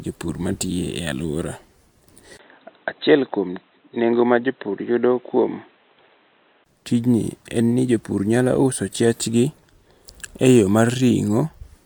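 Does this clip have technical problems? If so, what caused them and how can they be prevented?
Yes. From 2.37 to 6.66 s the recording likely had its input switched to a poorer device, such as another microphone or a headset's call profile, before returning to the original. That narrower path makes the speech dull and boxy, with nothing above 4 kHz, leaves a 20 ms gap at the switch, and adds background noise about 40 dB below the speech, while the level barely changes. Locking the input device and disabling automatic device switching prevents this.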